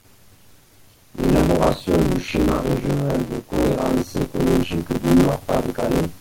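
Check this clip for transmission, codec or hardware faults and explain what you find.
One hardware fault is present: buffer tearing, running through the whole speech clip. A steady robotic buzz sits on the audio at about 93.8 Hz, which fits a 512-sample buffer. The writing side and the reading side of the ring buffer have slipped and now cross inside each period. Roughly half of every buffer plays audio from one lap earlier, around 40 ms old. Hard joins on both sides of that stale stretch produce the rattle, and it sounds only while the voice is active.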